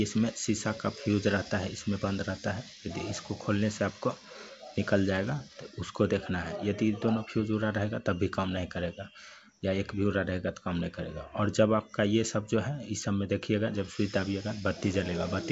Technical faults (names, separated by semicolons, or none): clock slip clicks